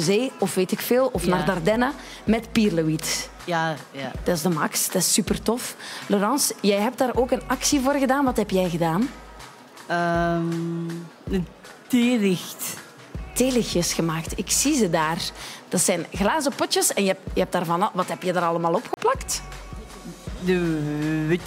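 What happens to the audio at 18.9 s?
At 18.94 s the audio drops into a block of digital silence lasting 30 ms, until 18.97 s. A run of samples has been replaced by zeros, as happens when the output buffer isn't filled in time, so the signal cuts off and returns abruptly with no fade. At this length the result is a brief hole. Unlike a dropout that fades or a concealed packet loss, nothing fills the gap.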